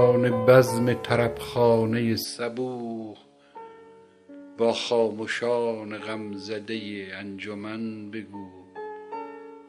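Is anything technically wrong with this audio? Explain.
Yes. From 2.24 s to the end, the sound abruptly loses its top end, with nothing above about 10.5 kHz, drops roughly 5 dB in level and picks up a new, faint background noise floor. This is likely an input switched to a poorer device, a narrower-band microphone taking over mid-recording. Unlike a simple filter or EQ change, the band limit, level and noise all shift together at one instant, with no gap at the switch.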